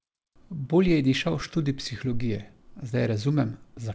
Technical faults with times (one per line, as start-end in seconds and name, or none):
none